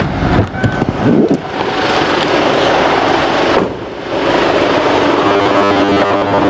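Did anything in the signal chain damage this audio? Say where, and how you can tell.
Yes. Gain pumping runs throughout: the gain swings by about 20 dB, pulled down under loud sounds, likely from excessive input gain into fast limiting, unlike gating.

From 5.27 s to the end there is robotic sound from repeated short buffers: a rigid 100 Hz buzz, fitting 10 ms driver-buffer repeats. Its fixed pitch distinguishes it from codec warble.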